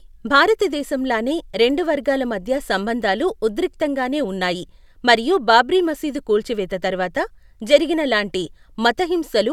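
No technical faults can be heard anywhere in the recording; the signal stays continuous and stable throughout.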